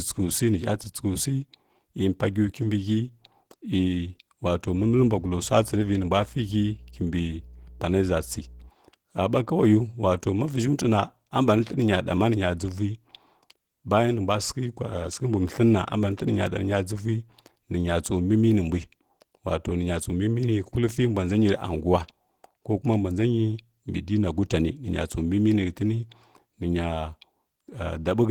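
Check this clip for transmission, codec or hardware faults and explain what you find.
Two faults are present: codec damage throughout and a burst of hum early on.

Across the whole clip the speech sounds hoarse and faintly robotic. This is Opus voice compression in hybrid mode, which points to roughly 16 kbps. Coarse SILK excitation coding does the damage, even though CELT keeps content up to about 20.2 kHz.

From 4.63 to 8.71 s a steady low 60 Hz drone sits roughly 20 dB under the speech. This is mains hum, with power-line current leaking in through a ground loop or nearby transformer.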